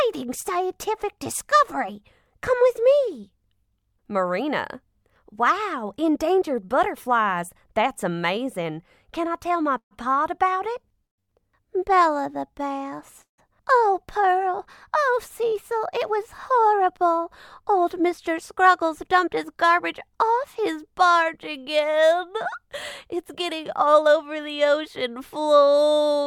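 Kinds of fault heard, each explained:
call audio freeze: Three times, at 9.77 to 9.93 s, 11.05 to 11.20 s and 13.22 to 13.40 s, the sound stops for roughly 150 ms and resumes exactly where it left off, with nothing lost, likely because packets were held up and the jitter buffer ran dry. The first and third open with a brief fading continuation of the last sound, and each has about 100 to 130 ms of silence, seen as a blank vertical stripe on a spectrogram and a flat stretch in the waveform.
short stall from a late packet: Right after the second freeze, from 11.20 to 11.30 s, a single packet arrived late and the receiver held the last sound for about 84 ms before carrying on. Nothing is dropped, but that sound lingers unnaturally. On a spectrogram this shows as a short band of frozen, repeated harmonics with slightly smeared texture; the waveform shows a repeating cycle.
jitter buffer speed-up: The buffer had built up extra audio, so the receiver trimmed tiny pitch-period pieces to catch up, at 15.98 to 17.85 s (105 % speed), 18.84 to 19.80 s (104 %) and 23.13 to 24.69 s (108 %), cutting roughly 100, 50 and 150 ms. 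Pitch stays put while timing runs faster, sounding hurried at 105 % and 108 %. Spectrograms show compressed events at unchanged frequencies; waveforms show faint splice points between cycles.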